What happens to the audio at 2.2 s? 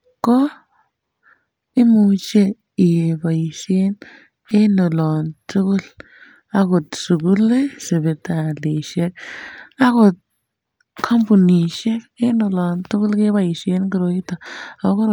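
Nothing goes wrong at 2.2 s; the speech runs on without a dropout, click or distortion at that point.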